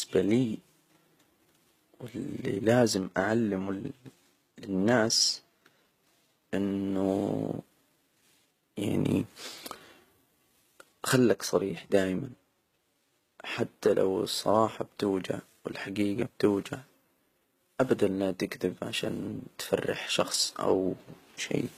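From start to finish the speech carries plainly audible HE-AAC compression damage. The top end sounds synthetic, and the s sounds come out gritty and lispy. That's likely spectral band replication: the upper band is copied up from lower frequencies and shaped only roughly, so the harmonics don't line up. Nothing reaches above about 14.9 kHz, and the damage fits a low bitrate of around 20 kbps.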